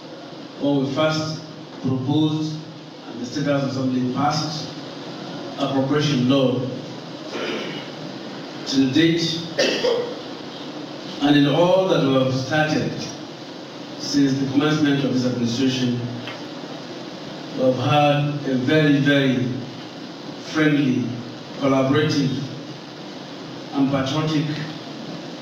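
Sample clock jitter runs through the whole recording. The converter's clock wanders by roughly a microsecond or two, so each sample lands slightly off its proper instant, and the error grows wherever the waveform changes fastest. The result is a fine hiss and grain sitting about 40 dB below the signal, swelling on loud, bright passages and disappearing in the gaps. That dependence on the signal separates it from an ordinary noise floor, which stays constant through silence.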